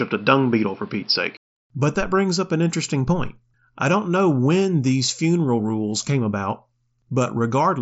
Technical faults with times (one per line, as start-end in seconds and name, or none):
0.00-1.56 input switched to a poorer device